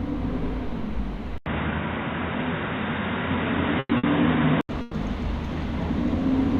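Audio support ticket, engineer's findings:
Input switched to a poorer device, 1.38 to 4.69 s. Abrupt dull, boxy band with nothing above 3.8 kHz, an 80 ms silence at the switch, a level shift of around 5 dB, and a new noise floor roughly 30 dB down. Likely a change of capture device. Unlike a codec bandwidth drop, tone, level and noise all change together, and all recover at 4.69 s.

Burst of packet loss at 3.79 s (120 ms concealed, then 30 ms of silence), 3.97 s (60 ms) and 4.81 s (120 ms). Receiver-side concealment stretches the last sound and fades it, then playback resumes with the stretch skipped. Unlike a plain dropout, the gap holds a fading continuation rather than silence, and the content in between is missing rather than delayed.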